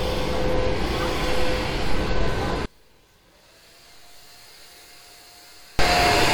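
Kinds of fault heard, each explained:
One channel inverted: the sound collapses by about 30 dB to a faint residue, likely from reversed polarity cancelling in mono; the waveform shrinks and the spectrogram dims.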